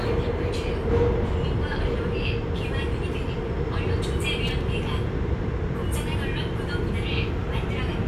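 At about 4.47 s there's a short burst of loose connector crackle, lasting roughly 0.14 s to 4.61 s. A worn or grubby contact somewhere in the chain is flickering open and shut as it shifts, chopping the signal into an irregular, scratchy rattle.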